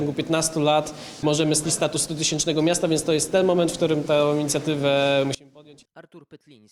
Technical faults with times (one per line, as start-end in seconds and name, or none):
1.64 skip ahead
1.87-2.84 jitter buffer speed-up
5.35-6.71 one channel inverted